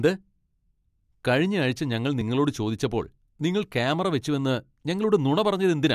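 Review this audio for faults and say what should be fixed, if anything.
Three tiny skips in the speech can be heard at 1.23 s, 2.21 s and 4.21 s. They come from overlap between stream segments. The audio arrives in one-second segments whose time stamps overlap slightly, and the player trims the overlapping stretch even though that sound was never actually duplicated. Between 6 and 18 milliseconds of real audio vanish at each of those boundaries, so the waveform jumps abruptly. To prevent it, the segment time stamps should be generated so that consecutive segments abut exactly, or the player should discard only audio it has confirmed is duplicated.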